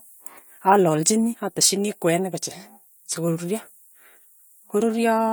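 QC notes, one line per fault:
No faults found in this speech clip. There is nothing to log.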